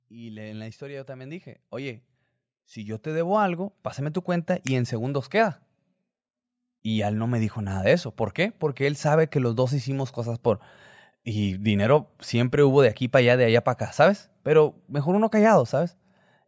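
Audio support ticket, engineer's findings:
Automatic gain rising, 0.08–5.29 s: speech and background swell together by about 16 dB as AGC lifts quiet input; waveform envelope ramps steadily, band-limited below 8 kHz.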